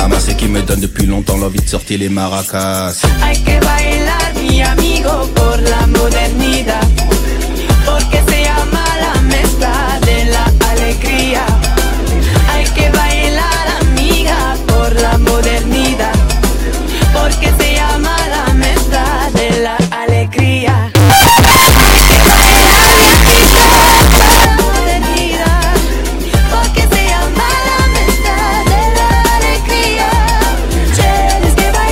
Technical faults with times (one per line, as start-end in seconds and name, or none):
20.95-24.45 float read as integer